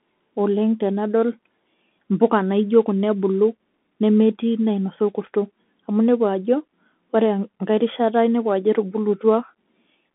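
From start to finish the speech passes through a Bluetooth CVSD headset codec. It sends one bit per sample, either up or down, with an adaptive step size, which fits a 64 kbps link. Nothing above 3.8 kHz survives, and the voice sits in a band of roughly 200 Hz to 3.5 kHz. Unlike a clean telephone band-limit, the damage here is plainly audible: a granular hiss under the speech, scratchy s sounds, and distortion where loud high content outruns the step size.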